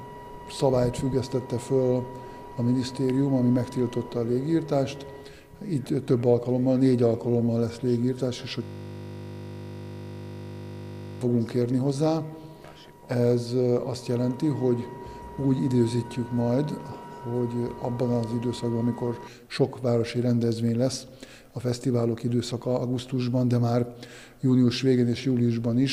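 A system hang loop runs from 8.63 to 11.21 s. For about 2.6 seconds the audio collapses into one 20 ms fragment played back-to-back well over a hundred times. The computer or its audio driver stalled while the sound hardware kept cycling through the last filled section of its ring buffer, which fits a buffer of about 20 ms. With a loop that short, the repeats fuse into a steady 50 Hz buzz.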